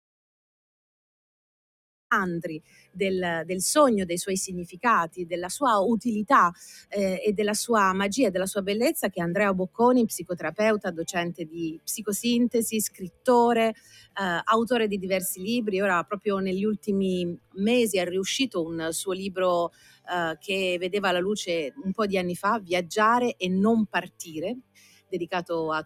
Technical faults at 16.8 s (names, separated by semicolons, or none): noise suppressor applied to music or sounds; sound cut by the noise suppressor